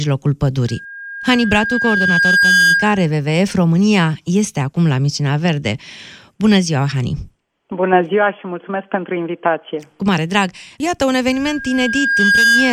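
A microphone picks up its own loudspeaker, causing loudspeaker feedback squeal: a 1.6 kHz tone swells over a second or two, from 0.68 to 3.13 s and from 11.32 s to the end.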